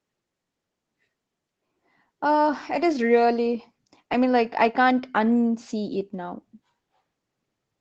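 No technical faults can be heard in this speech.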